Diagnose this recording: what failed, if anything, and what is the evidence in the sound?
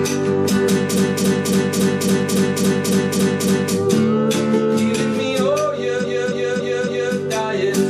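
Repeated frames, at the codec or storage stage, from 0.93 to 3.72 s and again from 5.99 to 7.11 s. The same 0.28 s block of sound plays over and over, a stutter that restarts every 278.6 ms. It repeats ten extra times in the first stretch and four in the second. The block length fits a run of six compressed frames being written or sent more than once, and the decoder faithfully plays each copy. This lengthens the audio by about 2.79 s and 1.11 s.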